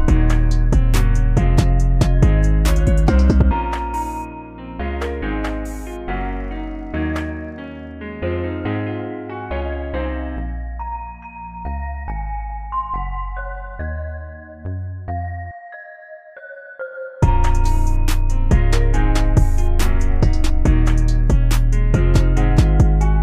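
No technical faults can be heard anywhere in the recording, and the signal holds steady throughout.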